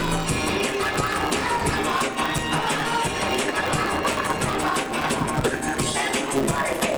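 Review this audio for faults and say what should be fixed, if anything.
A block size mismatch (truncated) runs throughout: block tails are discarded, causing a 138 Hz buzz and 1.6x speed at near-normal pitch, which fits 512-sample writes. Match the block sizes at every stage.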